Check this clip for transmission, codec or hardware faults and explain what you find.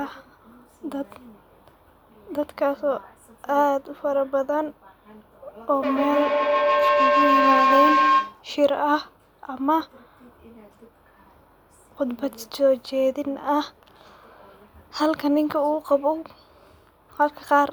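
One fault is present: a feedback howl from 5.68 s to 8.44 s. Two devices in the same room are on the call, and each trip from loudspeaker back into microphone returns more level than it started with. The sound narrows to a tone near 1 kHz, with the loop repeating roughly every 150 ms, swelling to about 2 dB above the speech. An echo would repeat the speech and fade, and a steady interference tone would hold constant. This howl grows instead.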